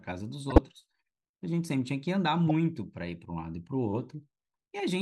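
At 0.50 to 0.58 s and again at 2.47 to 2.51 s the speech is broken by a corrupt frame decoded: damaged bits in a few compressed frames were played anyway, so misread gains and codes throw energy to the wrong frequencies. Each is heard as a short squeaky burst, the first fairly loud, the second quieter. On a spectrogram each shows as a brief block of smeared, misplaced energy; the waveform shows a matching spiky blip.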